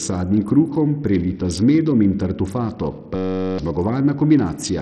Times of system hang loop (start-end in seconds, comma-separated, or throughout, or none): 3.16-3.58